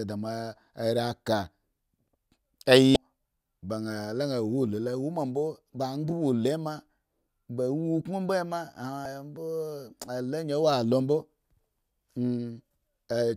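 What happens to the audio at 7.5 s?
Nothing goes wrong at 7.5 s; the speech continues intact through that moment with no audible fault.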